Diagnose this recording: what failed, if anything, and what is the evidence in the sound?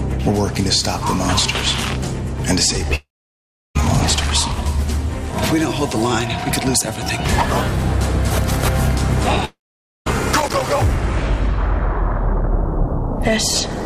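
The network likely suffered a long network dropout. At 2.95–3.77 s and 9.45–10.08 s, about 0.8 s and 0.62 s of audio vanish: a brief fading fill, then silence.

In the analogue wiring, loose connector crackle from an intermittent contact chopped the signal. Irregular crackling bursts appear at 5.25–5.36 s and 10.32–10.62 s.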